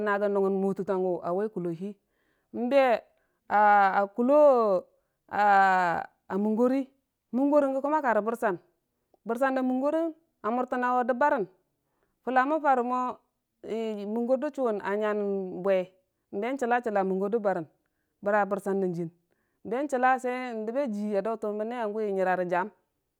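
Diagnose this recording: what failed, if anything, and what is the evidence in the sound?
Nothing failed in this speech recording: no stage in the chain, from analogue wiring through playback, leaves any audible trace of trouble.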